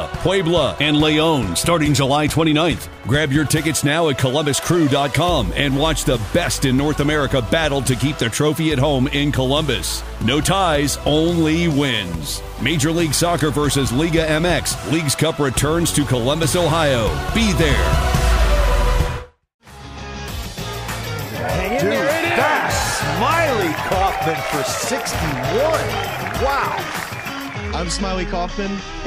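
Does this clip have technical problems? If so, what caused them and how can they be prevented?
No, no technical faults here.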